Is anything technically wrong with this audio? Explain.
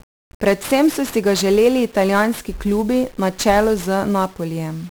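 Yes. For the whole speech clip the audio shows heavy damage from 1-bit DFPWM compression. Each sample carries a single bit that nudges an adaptive level up or down, so the waveform is traced as a staircase of small steps, consistent with a stream around 48 kbps. The sound is fuzzy and crackly, with dense hiss covering the treble.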